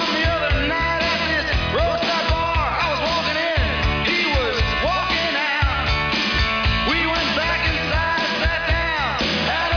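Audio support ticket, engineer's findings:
No dropouts, glitches, level jumps or timing errors are audible at any point, and the signal shows no fault that would need tracing to a component.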